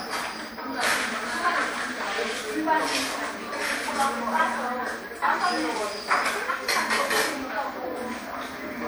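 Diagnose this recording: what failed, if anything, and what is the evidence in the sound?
The failure sits at the codec stage and runs through the whole clip: generation loss from repeated lossy encoding. The sound is swirly and hollow, with a shifting smear, and transients are blurred rather than crisp. That is more damage than a single pass at this quality would leave. A lone low-bitrate encode gives a fixed, steady dullness. Here the artefacts are compounded. The likely cause is an MP3 chain at around 96 kbit/s, re-encoded about seven times, each pass quantising again on a shifted frame grid.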